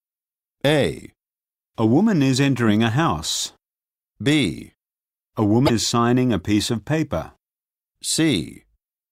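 At 5.63 to 5.70 s, just before "signing a piece of", the speech is briefly disrupted. This is damaged data in a compressed stream. Corrupted bytes make the decoder misread those frames and lose sync for about 70 ms until it finds the next valid header.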